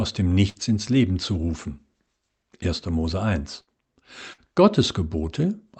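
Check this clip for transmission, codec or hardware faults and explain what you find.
Three bursts of packet loss interrupt the speech at 0.49 to 0.58 s, 3.61 to 3.70 s and 4.33 to 4.41 s. Each time, about 50 to 60 ms of lost audio is concealed by stretching and fading the preceding sound into a buzz or hiss, then roughly 60 ms is skipped. On a spectrogram this shows as smeared, decaying bands, and the waveform shows a jump at each resumption. The call path's coding band-limits everything above about 8 kHz.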